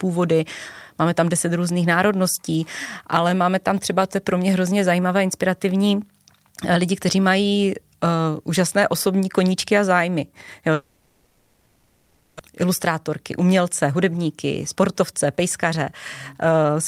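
From 10.73 to 12.41 s, a long network dropout is the likely cause: no audio arrives, and the receiver stretches the last sound into a fading buzz for about 1.7 s. Speech then resumes with roughly a second of it lost.

Jitter buffer speed-ups follow as the receiver sheds the backlog by cutting out short pitch-period slices. The speech runs 110% fast at 13.86–14.35 s, 114% at 14.75–15.93 s, and 151% at 16.34–16.78 s, sounding hurried but at unchanged pitch.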